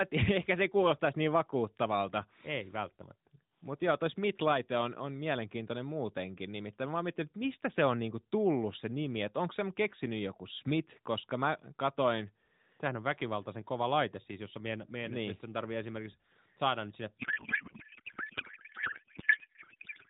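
At 17.18 s, just after "esimerkiksi saada nyt sinne", the receiver starts unpacking the AMR bits in the wrong layout. Frames sent octet-aligned are read as bandwidth-efficient, so every field lands in the wrong place. This codec payload misread replaces the speech with garbled noise and warble that barely tracks it, lasting to the end. Up to then the AMR narrowband coding, which fits the 12.2 kbps mode, leaves speech band-limited below 4 kHz with light coding damage.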